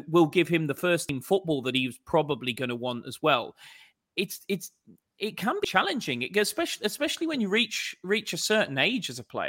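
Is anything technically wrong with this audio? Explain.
Yes, there are two spots where compressed frames are skipped, at 1.09 s (between "give him the first" and "football that he's probably") and 5.64 s (between "it's it's it can" and "it especially especially when"). Each time roughly 100 ms of speech vanishes, which fits one dropped frame of about 93 ms. The decoder jumps ahead by the length of the missing frame, so the speech on either side is joined directly.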